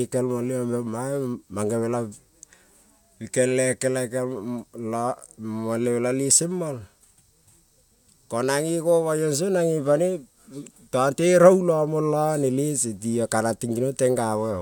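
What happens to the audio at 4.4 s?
Nothing goes wrong at 4.4 s; the speech carries on intact through that moment, with no dropout, click, or distortion to be heard.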